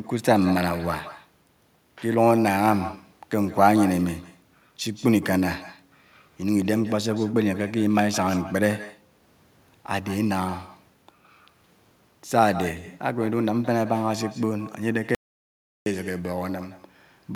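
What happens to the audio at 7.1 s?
At 7.1 s, as throughout the clip, echo with no canceller returns the speech about 150 ms later, thinner and about 17 dB quieter, a distinct repeat rather than smeared room reverb.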